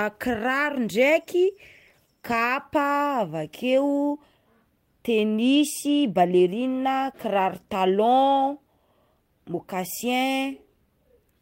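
No technical faults turn up anywhere in the speech, so there is nothing to report.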